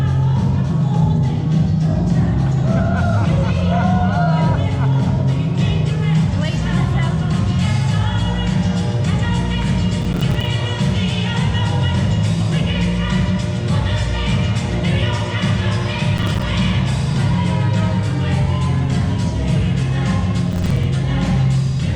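Processor overload crackle at 10.02–10.47 s, 16.18–16.42 s and 20.52–20.84 s: the processor repeatedly missed its deadlines, and each missed buffer, a few milliseconds long, was left silent. Strings of these hard-edged dropouts merge into a gritty, tearing crackle over the sound.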